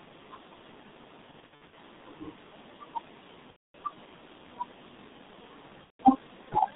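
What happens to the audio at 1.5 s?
Packets were dropped between 1.31 and 1.77 s, about 240 ms of audio missing in short bursts, the longest a 60 ms gap. The speech decoder covered each gap by extending its last pitch and filter at falling gain, so the speech turns into a buzzy, stretched tone or tinted noise that fades, and stays weak and distorted just after each burst as the decoder recovers. Underneath, the G.723.1 codec at 6.3 kbit/s confines everything to roughly 150 Hz to 3.7 kHz and damages it heavily, leaving the speech muffled and hoarse with blurred consonants.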